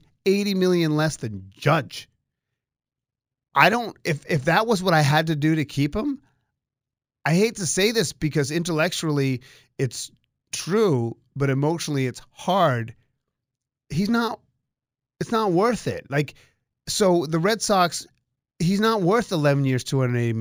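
Throughout the speech there is imaging from linear upsampling. The rate appears to have been raised by straight-line interpolation, which fits a 16 kHz source raised to 48 kHz. The top of the speech band sounds dulled, and a faint mirrored copy fills roughly 8 to 16 kHz at around 25 dB below the signal, giving sibilants a light metallic shimmer. Unlike aliasing, the stray energy sits above the original band and mirrors it, rather than folding down into it.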